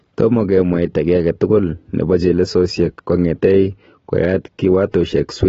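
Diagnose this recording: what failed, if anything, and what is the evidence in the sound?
The codec stage is the likely culprit here, with AAC compression audible across the whole speech clip. Nothing survives above 7.6 kHz, and the remaining band sounds smeared, with a warbling, fizzy texture on sibilants, which fits AAC-LC at a low bitrate of roughly 27 kbps. The encoder is starving its frequency lines of bits against a hearing model. A plain low-pass filter would cut cleanly without that swirling, hollowed-out texture inside the passband.

At the driver or buffer stage, a drift correction step runs from 3.72 to 4.27 s, where playback slows by 5.3% and pitch drops about 94 cents, close to a semitone, then snaps back. This is most likely clock-matching software changing the rate in one jump to refill its buffer. Speed and pitch move together abruptly and return abruptly, unlike tape wow, which glides continuously, or a pitch-shifter, which keeps timing fixed.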